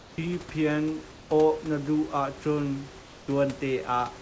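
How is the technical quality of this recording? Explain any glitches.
The recording has two short stretches of comfort noise in place of the background, at 1.12 to 1.30 s (180 ms) and at 3.02 to 3.28 s (260 ms). In those pauses the real room noise, sitting about 22 dB below the loud parts, drops out and is replaced by a flat, textureless hiss about 2 dB quieter. The likely cause is discontinuous transmission: the sender stopped sending when its detector heard no speech, and the receiver synthesised noise roughly matched to the background. The audio above 8 kHz is absent throughout, as expected on this call path.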